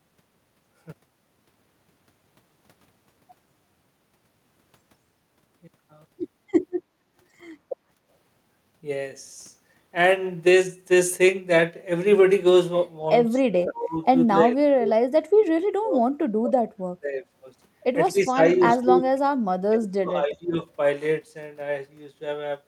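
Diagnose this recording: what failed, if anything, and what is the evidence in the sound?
Call processing: background gated by the echo canceller. Between 7.95 and 8.06 s the room tone drops by about 8 dB for roughly a tenth of a second, then comes straight back. That is the echo canceller's suppressor clamping the microphone path while the loudspeaker signal was active. The short duration and clean recovery show the canceller releasing as soon as the far-end energy fell away.

Call processing again: the talker's speech is cut down in a run of bursts at 13.37–14.03, 14.32–14.94, 15.34–16.02, 16.33–17.23, 18.12–18.39, 18.57–19.03 and 19.69–20.62 s. The dips range from mild, around 10 dB, to near-muting of roughly 35 dB, each lasting a fraction of a second. The likely cause is speech suppressed in double talk. With both ends active, the canceller could not tell near-end speech from echo and attenuated it along with the echo.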